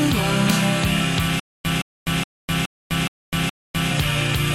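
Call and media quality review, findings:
Stutter with silent gaps, 1.40–3.91 s. The same 166 ms fragment repeats 6 times, each followed by 254 ms of silence (period 420 ms). Waveform: identical blocks separated by flat gaps. Spectrogram: repeated matching slices with empty columns. Likely a player/stream stall replaying its last buffer; audio for that span lost.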